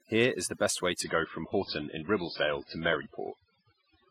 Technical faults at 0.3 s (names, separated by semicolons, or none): overdone noise removal